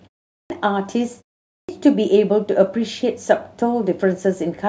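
Clipped start after a pause occurs at 0.33 s and again at 1.52 s. Each time, the output path appears to have gone idle during the preceding silence of about 0.33 s and 0.38 s, then needed time to wake before passing audio again. About 171 ms and 167 ms of speech are lost, so the speech bursts in abruptly, its opening sounds missing, while the pauses themselves simply go quiet without any loss.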